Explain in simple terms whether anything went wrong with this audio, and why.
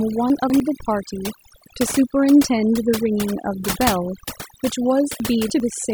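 Throughout, the pauses fall to near silence with twinkling specks. That is overdone noise removal: a noise reduction tool set too strongly muted any frequency band it mistook for noise, taking quieter parts of the voice with it.

Twice the speech briefly jumbles, from 0.3 to 0.6 s and again from 5.2 to 5.6 s. These are chunks out of order. Short pieces of sound, about a tenth of a second each, arrived late and played two or three places after where they belonged. Nothing is missing, but the sequence is scrambled, with hard joins between the pieces.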